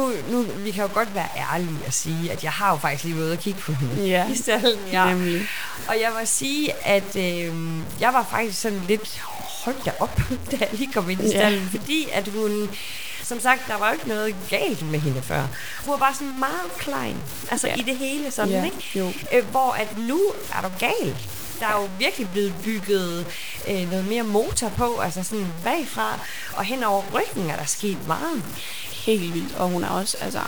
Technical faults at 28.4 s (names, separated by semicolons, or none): low bit depth without dither